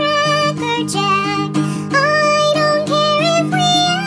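Wrong sample rate throughout: the audio plays about 1.38 times too fast, which fits 16 kHz material played at 22 kHz, raising pitch about 5.5 semitones.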